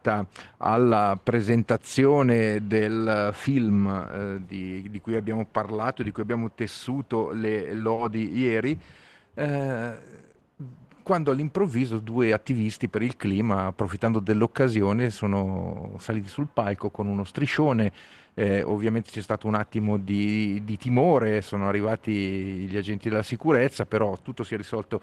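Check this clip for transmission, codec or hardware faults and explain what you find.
Two transmission faults are audible, both from the jitter buffer on the receiving side.

From 7.94 to 8.00 s there is a short stall from a late packet. A packet missed its playout time and the buffer ran dry. The receiver held the last sound for 30 ms, then resumed exactly where it left off. Nothing is lost, but the sound hangs briefly with a slight buzz or dip. The delay grows by 30 ms.

From 18.78 to 19.06 s there is a jitter buffer speed-up. The buffer had built up too much audio, so the receiver repeatedly cut out pitch-period-sized slices, about 40 ms in total. Playback runs at 111% speed with unchanged pitch, so this stretch sounds hurried.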